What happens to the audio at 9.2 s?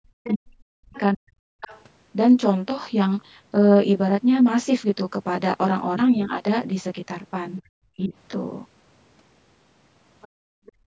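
At 9.2 s you're hearing channel delay with comb filtering, and it runs through the whole clip. One channel lags by roughly 20 ms before the mono sum, so evenly spaced notches cut in from around 30 Hz upward, giving the speech a rough, slightly doubled quality beneath the call's 8 kHz ceiling.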